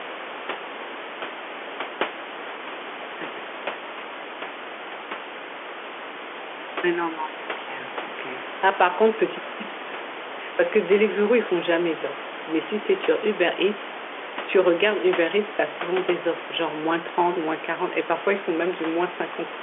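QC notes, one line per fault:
No faults are audible: the speech occupies a telephone band of about 300 Hz to 3.4 kHz, which fits G.711 A-law telephone coding at 64 kbps, and the room noise sits about 16 dB below it.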